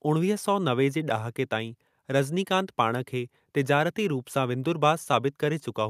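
A short speech recording with no technical faults to report. Nothing in it calls for a time or a cause.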